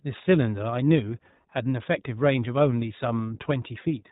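From start to end, the speech has passed through the iLBC codec. It codes each 20 ms frame on its own, and at a rate that fits 15.2 kbps it leaves plainly audible damage. Nothing above 3.8 kHz survives, so the sound is muffled and narrowband, with a rough, slightly synthetic edge.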